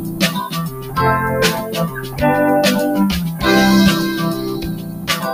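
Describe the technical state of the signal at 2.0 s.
At 2.0 s the sound sits inside a stretch, from 1.89 to 2.2 s, where it has been cut by the noise suppressor. The suppressor misjudged this sound as noise and pulled it down harder than its surroundings, by about 6 dB at the deepest point, for roughly a third of a second. Held or decaying parts sag and their tails end early, while sharp onsets survive. On the waveform the envelope visibly dips across that window; on a spectrogram sustained partials thin out and fade prematurely.

Underneath, the whole signal carries low bit depth with noise shaping. The quantisation fits a 7-bit signal, and the rounding error has been steered upward in frequency, so a steady, thin hiss is audible, roughly 20 dB below the signal and climbing sharply toward the top of the band. A spectrogram shows a constant noise floor that brightens into the highest frequencies regardless of content; the waveform looks grainy, with a fuzzy baseline in quiet passages.

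The dip at 2.0 s is one instance of a broader problem: a noise suppressor applied to music or sounds stays active across the clip. Treating steady tones, ambience and reverb as noise, it swings gain by around 10 dB, letting attacks through while sustains and tails sink, so the sound pumps and flutters. On a waveform the envelope breathes unevenly after each onset; on a spectrogram decays look chopped and patchy rather than smoothly fading.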